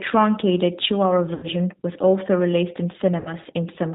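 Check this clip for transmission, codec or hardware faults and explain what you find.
Two faults: low-bitrate codec coding throughout, and two packet-loss gaps patched by the decoder.

G.729 codec, whole clip: speech is band-limited below 4 kHz and sounds rough and synthetic, which fits 8 kbit/s G.729A. The pulse-based excitation gives a roughness that plain filtering wouldn't.

VoIP packet loss concealed by the speech codec, 1.34–1.47 s (just before "was also released in") and 3.20–3.33 s (just after "was also released in"): the decoder extrapolated from its last pitch and filter at falling gain, suggesting about three and then two lost packets. Unlike a dropout, there's no silence, and the voice recovers only gradually afterwards.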